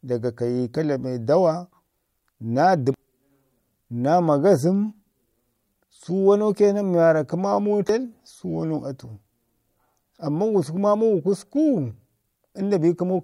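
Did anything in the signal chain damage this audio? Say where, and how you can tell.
Yes. Damaged data in a compressed stream shows up at 2.94 s and again at 7.89 s, each as a brief chirp or blip cutting into the speech. The damage sits in the compressed data ahead of the codec, whether stored or transmitted: part of the compressed bitstream was lost or overwritten, so the decoder misread the frames at those points, lost sync, and had to hunt for the next valid frame header before decoding cleanly again.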